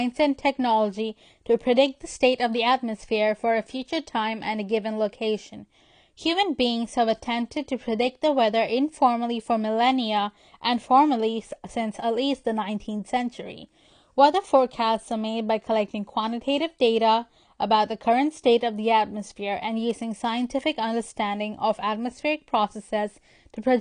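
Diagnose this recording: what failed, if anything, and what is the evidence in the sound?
The speech sounds dull and smeared from start to finish, with a fizzy, warbling edge on sibilants and nothing above 9.8 kHz. The stage is the codec: likely AAC compression, with AAC-LC at a bitrate around 32 kbps lowering the cut-off and coarsely quantising what remains.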